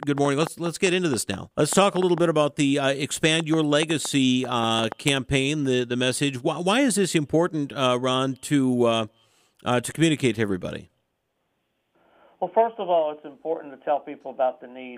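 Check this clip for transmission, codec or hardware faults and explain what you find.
There is one fault, a train of clicks from 0.03 s to 5.1 s. A pulse source, likely interference from nearby equipment or a faulty connection, injects similar short clicks at an uneven pace of about 4.6 per second, around twenty in total. Each peaks roughly 10 dB above the sound, so they stand out as irregular ticking.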